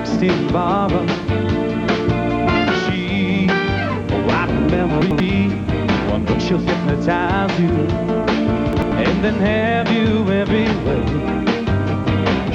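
Twice the audio pipeline delivered a chunk one slot late, so it played after the chunk that should have followed it. Each chunk is about 93 ms. This is chunks out of order, at 5.02 to 5.20 s and again at 8.73 to 8.92 s. Nothing goes missing, but each swap leaves a brief jumbled skip backwards in the sound, with three hard joins.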